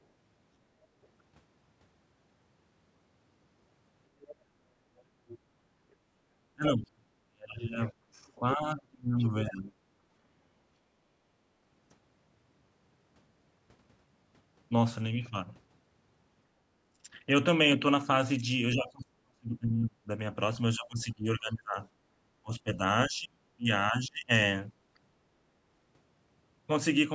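At 1.03 to 1.08 s and again from 4.2 to 5.92 s there's the other side's voice leaking through, faint, then louder at about 20 dB under the talker. It's likely loudspeaker echo the canceller missed, and it returns at 7.48 to 8.32 s. Speech suppressed in double talk runs from 6.54 to 9.92 s, blips at 16.94 s, then hits 18.74 to 24.31 s. The talker ducks by up to about 35 dB, likely because the canceller turned everything down while both sides spoke.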